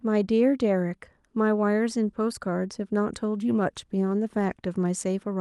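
From 3.24 s to 4.75 s the speech coarsens and turns watery, a call bitrate drop that fits the Opus encoder falling from about 64 to 28 kbps for roughly 1.5 s. It differs from packet loss because the degradation is continuous, without gaps or glitches.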